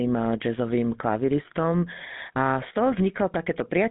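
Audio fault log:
Throughout, GSM full-rate codec: the speech has a plainly audible buzzy, gravelly roughness. The voice is rebuilt from a vocal-tract filter driven by coarse, regularly spaced excitation pulses, a sound consistent with the 13 kbps GSM full-rate coder. Only about 150 Hz to 3.7 kHz survives. A spectrogram shows a hard ceiling with nothing above 3.7 kHz, thin lows, and smeared, grainy harmonics. The waveform looks jagged, with rough periodic texture inside voiced stretches.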